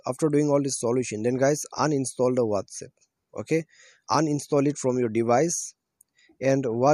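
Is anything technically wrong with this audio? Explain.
No, nothing technically wrong stands out here, and the whole thing comes across without any problem worth flagging.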